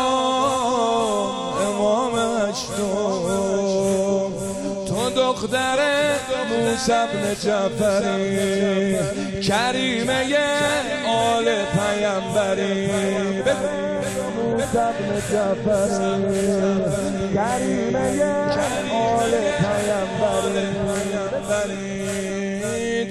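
No dropouts, clicks, distortion or other technical faults are audible anywhere in the recording.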